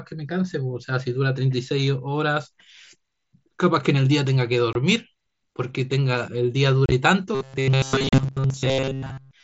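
At 4.73 to 4.75 s, 6.86 to 6.92 s and 8.09 to 8.13 s, unconcealed Bluetooth headset packet loss cuts the speech. Chunks of about 22 ms, 45 ms and 38 ms are missing, with the middle loss scattered over 60 ms in runs up to 30 ms. Nothing fills the gaps, so they are abrupt silent holes rather than a tonal change. From 7.35 s to the end, the speech turns into a rigid, metallic buzz locked at 134 Hz that still loosely follows the words. The likely cause is starved playback repeating a short buffer of about 7.5 ms in place of the real audio most of the time. A fixed pitch unrelated to the voice separates it from the empty holes of packet loss, and the 8.09 s dropout falls inside this buzz. Under both faults the mSBC headset link at 61 kbps adds only light graininess.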